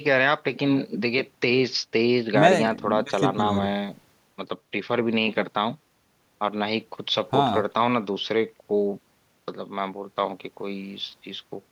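No technical faults are audible at any point in the speech recording.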